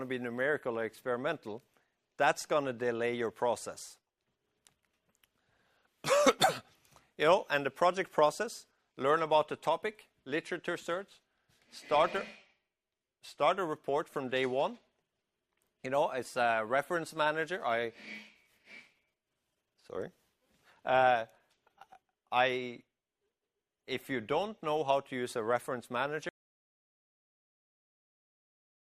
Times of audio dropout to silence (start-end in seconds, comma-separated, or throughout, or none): 26.29-28.80